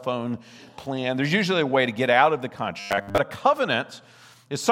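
From 2.80 to 3.18 s the sound becomes a metallic buzz at 100 Hz. This is robotic sound from repeated short buffers, likely late audio replaced by a looped 10 ms chunk for most of that stretch. The waveform shows identical repeating cycles, and the spectrogram shows flat harmonics spaced 100 Hz apart.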